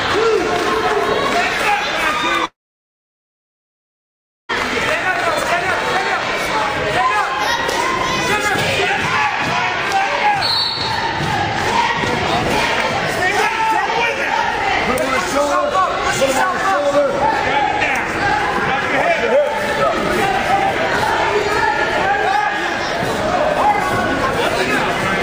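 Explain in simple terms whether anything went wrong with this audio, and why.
From 2.45 to 4.51 s the sound stops and turns to silence, then resumes with that part gone, likely a long network dropout.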